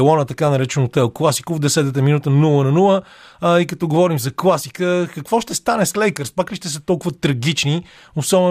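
No technical faults can be heard in this recording.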